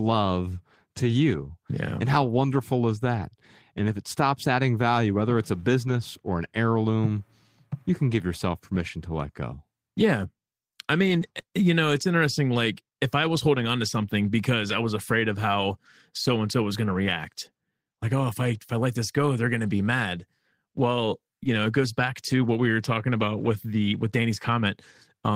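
A speech recording, and nothing technically wrong turns up anywhere in it.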